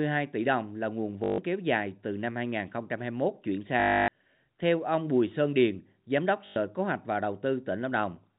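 At 1.24 to 1.38 s, between "tỷ đồng là nguồn" and "kéo dài từ năm", the speech breaks into a buzzing stutter: packet loss with the last packet repeated. The same short fragment replays for 140 ms, then for 280 ms at 3.8 s and 100 ms at 6.46 s. The repeats give a roughly 50 Hz buzz that fits 20 ms packets. Unlike a silent dropout, the gap is filled with looped sound. The G.711 telephone band is audible throughout.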